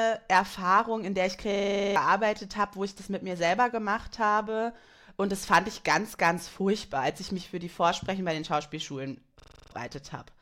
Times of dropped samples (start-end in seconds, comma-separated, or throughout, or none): none